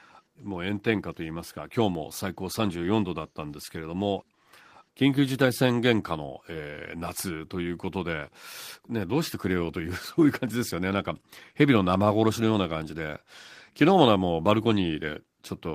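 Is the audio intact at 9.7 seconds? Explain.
Yes, at 9.7 seconds the audio is intact, with no dropout, click, distortion or other fault audible at that point in the speech.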